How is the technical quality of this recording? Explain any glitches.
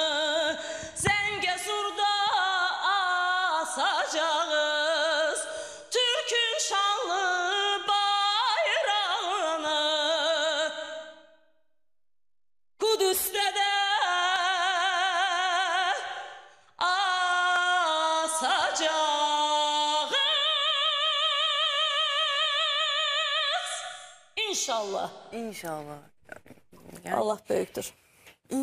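The recording has four short discontinuities, all of the same kind, at 14.36, 17.56, 20.02 and 27.68 s. Each is an abrupt jump forward in the sound with no gap of silence. This is likely a dropped buffer (overrun): the capture software fell behind, the hardware overwrote samples before they were read, and the surrounding audio was spliced directly together. About 40 ms is lost at 14.36 s, and about 20 ms at each of the others.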